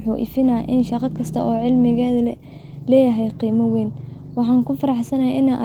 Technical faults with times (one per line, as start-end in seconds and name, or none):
none